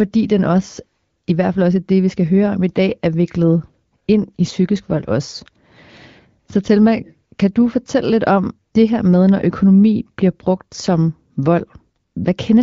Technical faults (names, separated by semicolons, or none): none